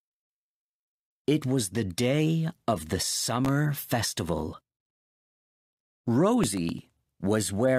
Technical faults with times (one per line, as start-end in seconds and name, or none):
3.13-3.49 processor overload crackle
6.44-6.97 processor overload crackle